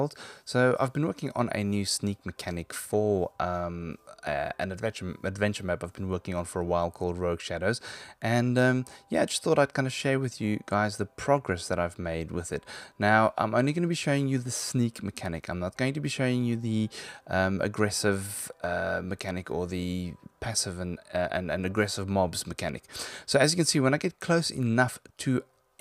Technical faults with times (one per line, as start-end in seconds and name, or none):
none